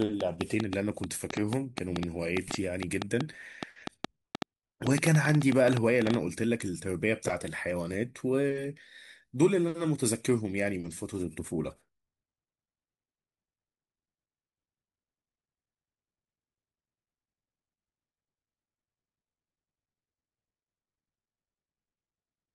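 From 0.02 to 6.15 s a train of clicks sits over the speech: roughly forty near-identical pulses at about 6.2 per second, unevenly spaced, peaking around 15 dB above the signal and audible in pauses, likely from interference by nearby equipment or a faulty connection or power supply.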